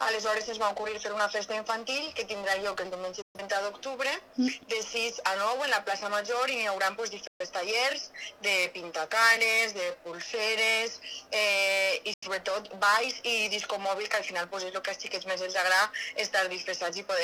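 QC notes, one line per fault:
3.22 to 3.40 s, digital broadcast dropout. The sound fades out in about 3 ms and goes silent. The receiver muted after bad frames, roughly 128 ms of programme, which fits three lost frames.
7.27 to 7.46 s, digital broadcast dropout. The same quick fade and mute recur. About 128 ms of audio is lost again.
12.14 to 12.28 s, digital broadcast dropout. This hole is shorter. About 85 ms is lost, which suggests two frames.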